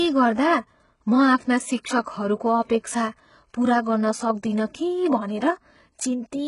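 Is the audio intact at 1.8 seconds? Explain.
No. Pre-echo appears at 1.83 s: a sharp attack lands late in a transform block, and the codec spreads quantisation noise meant for the loud onset across the whole block, so a brief hiss of about 17 ms precedes the attack and softens it.

HE-AAC compression runs through this moment too. The treble is heavily damaged, sounding gritty and metallic, with nothing above 11.1 kHz. This likely comes from spectral band replication copying lower bands upward at a very low bitrate, around 12 kbps.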